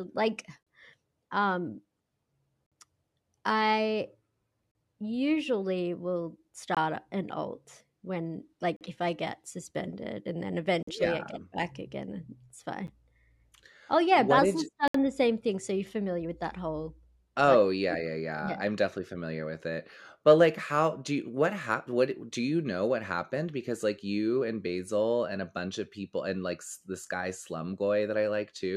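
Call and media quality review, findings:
Gap between stream segments: hard-edged silent holes of about 10 to 66 ms at 0.63, 2.66, 4.71, 6.75, 8.76, 10.83, 12.87 and 14.88 s, recurring every 2 s. Segment timestamps don't line up, so the player inserts silence at each 2 s segment boundary. No audio lost.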